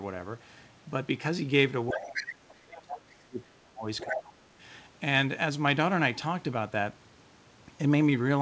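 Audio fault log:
1.92–3.87 s and 4.03–4.49 s, speech suppressed in double talk: the talker's level sags sharply, by around 25 dB at its deepest in the first stretch and around 20 dB in the second, and the dips last for about two seconds and then about half a second. Both dips coincide with the far end talking, so the echo canceller likely could not tell near speech from loudspeaker echo and attenuated everything.
2.12–2.23 s, 2.75–3.01 s and 3.98–4.20 s, other side's voice leaking through: short scraps of a second voice sit underneath the talker, about 5 dB below the speech in the first and third bursts and about 10 dB below in the second. They share the same band-limited G.722 character as the rest of the call, which stops at 8 kHz. The likely cause is far-end audio from the talker's loudspeaker reaching the microphone and escaping echo cancellation.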